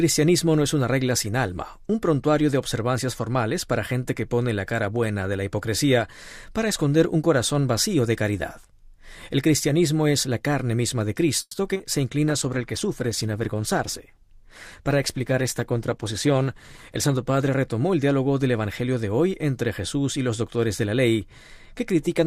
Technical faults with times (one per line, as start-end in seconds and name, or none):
11.41-11.55 call audio freeze
11.73-11.81 short concealed packet loss
12.31-17.58 call bitrate drop